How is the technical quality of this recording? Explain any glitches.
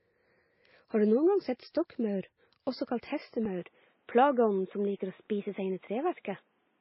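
The quality is poor, with two problems stacked on top of each other.

The first runs through the whole clip and sounds like transcoding between lossy codecs. Nothing comes through above about 5.6 kHz, and the smeared, swirly low-bitrate artefacts sit alongside the second codec's own artefacts. That combination fits a very low-rate MP3, roughly 18 kbit/s, likely re-encoded afterwards to WMA at around 64 kbit/s. The second encoder can't recover what the first threw away. It just spends its bits reproducing the old damage and adds its own.

The second starts at 3.46 s and lasts to the end. The input was likely switched to a poorer device there. The top end drops again, so from that point nothing reaches above about 3.8 kHz, and the speech turns duller and boxier. There's no gap at the change and the loudness stays about the same. A faint new noise floor comes in, sitting well below the speech, which fits a different, narrower-band microphone or a headset in call mode taking over mid-recording.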